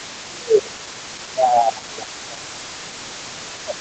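Other side's voice leaking through runs from 0.0 to 1.33 s and again from 1.82 s to the end of this speech clip: a second, faint voice sits roughly 20 dB under the main talker. It is likely residual echo, with the far end playing from the talker's loudspeaker back into the microphone and the echo canceller leaving part of it behind. Speech suppressed in double talk overlaps it, from 0.04 to 1.06 s (about 0.7 s of that stretch) and from 1.26 s to the end. The main voice sags by as much as around 15 dB while both sides talk. The likely cause is the echo canceller, unable to tell the near talker from the returning echo, turning everything down together.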